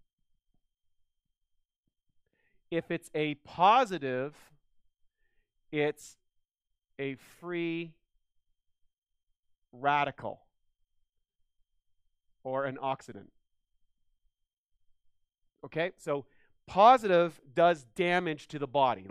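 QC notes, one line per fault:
Nothing to note here; I listened all the way along and there's nothing worth flagging.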